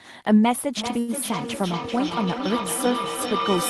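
It's a speech clip, and from 0.77 s to the end a feedback howl builds up. Two devices in the same room are on the call, so each trip from loudspeaker to microphone comes back louder and narrows to a tone around 1 kHz. The loop delay is roughly 0.4 s, and the howl peaks at about 4 dB below the speech. On top of that there's a short stall from a late packet at 0.99 to 1.11 s. The jitter buffer ran dry, so the receiver held the last sound for 89 ms until the packet showed up. Nothing is actually lost, but everything after it lands 89 ms later.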